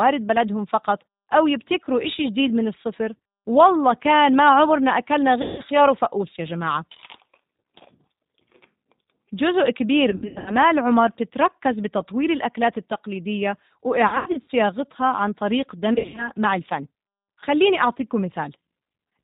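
G.729 coding runs through the whole recording. This 8 kbit/s codec rebuilds the speech from a vocal tract filter, a pitch predictor and a few pulses per half-frame, and passes nothing above 4 kHz. The voice is dull and band-limited, with a plainly audible rough, synthetic edge, because the sparse pulse excitation only approximates the real waveform.

VoIP packet loss concealed by the speech codec first appears at 5.42 to 5.62 s, where about 160 ms of audio goes missing. The decoder extends its last pitch and filter settings while turning the gain down, so the sound smears into a buzzy tone or coloured noise that fades. It strikes again at 10.10 to 10.56 s (240 ms lost, scattered over 360 ms), 14.08 to 14.50 s (200 ms over 400 ms) and 15.94 to 16.32 s (180 ms over 240 ms). In these later bursts the gaps come in runs of up to 80 ms, which points to 20 ms packets. Each frame builds on the previous one, so the voice stays weak and distorted briefly after each loss ends.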